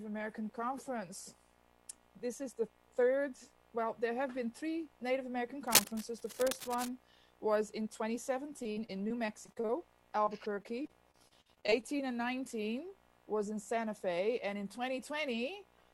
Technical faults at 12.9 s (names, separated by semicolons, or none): none